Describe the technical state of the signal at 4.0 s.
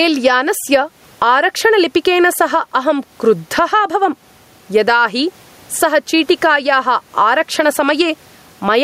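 At 4.0 s the speech shows gain pumping, which runs through the whole clip. The level swings by around 15 dB. The room noise sits about 43 dB below the speech, and loud and soft parts end up closer in level, so the sound is squashed. Likely cause: excessive input gain tamed by a fast limiter.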